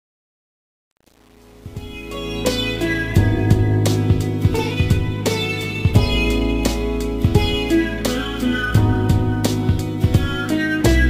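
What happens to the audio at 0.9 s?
At 0.9 s the clip is inside a span of truncation distortion on a fade, from 0.0 to 2.41 s. The fade-in was processed at too coarse a resolution, which fits an 8-bit stage, with no dither, so the quietest levels collapse into a few square steps. Through about 2.19 s the rising sound is gritty, before smoothing out as the fade-in completes at 2.41 s.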